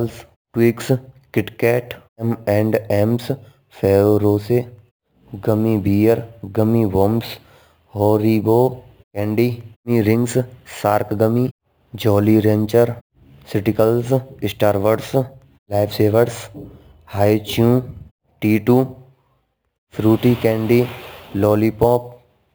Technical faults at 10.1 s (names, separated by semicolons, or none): imaging from sample-and-hold upsampling